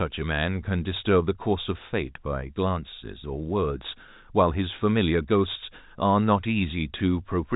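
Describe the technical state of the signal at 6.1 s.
At 6.1 s the speech is intact, with no dropout, click or distortion, just the narrow G.711 telephone band that stops below about 3.8 kHz.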